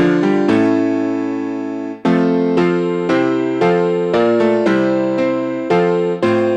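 No technical faults can be heard anywhere in the clip.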